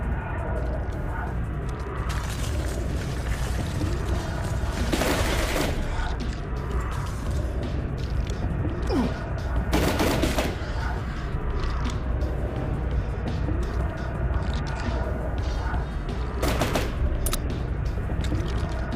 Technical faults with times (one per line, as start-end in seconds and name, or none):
none